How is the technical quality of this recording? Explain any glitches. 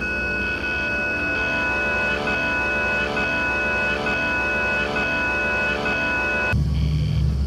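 The recording has two glitches.

At 1.35 s, compressed frames are skipped. Roughly seven frames go missing, so about 200 ms of audio never plays. The jump fits frames of about 26 ms. You hear the audio jump ahead.

From 2.34 s to 6.53 s there is a broken-record loop. A 0.9 s fragment repeats five times, back to back. The player or stream likely stalled and kept resending its last fragment. The audio that belonged in that span is lost.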